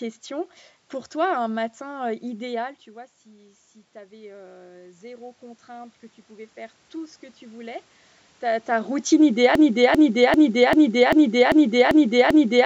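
Automatic gain rising runs from 2.6 to 7.84 s in this speech clip, starting just after "toi un matin". Around 2.5 s the talker moves back and the level at the microphone falls by about 19 dB. The automatic gain control hears the input as too quiet and raises its gain step by step, by about 10 dB, so the voice and the room noise swell together until "ta ta routine". Because the gain makes up only part of the loss, the voice stays about 9 dB below where it began. A broken-record loop starts at 9.55 s, after "ta ta routine", and lasts to the end of the clip. A 393 ms fragment repeats exactly, back to back, eight times. The likely cause is a stall in the player, encoder or stream that kept resending the last fragment it held, and the audio that should have played over those last three seconds is missing. The band-limiting from the call's microphone processing, with nothing above 8 kHz, can be heard throughout.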